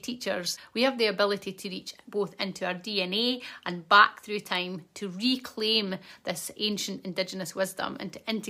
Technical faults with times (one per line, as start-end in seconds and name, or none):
none